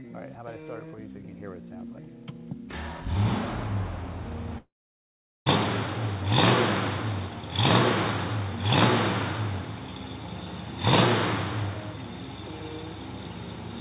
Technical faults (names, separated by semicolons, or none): long network dropout